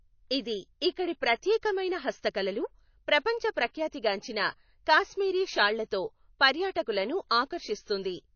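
MP3-style compression damage runs from start to finish: nothing is left above 6.6 kHz, and the speech has a watery, swirling quality with smeared consonant attacks. That points to likely MP3 encoding at a very low bitrate, around 29 kbps, where weak frequency lines flicker between frames.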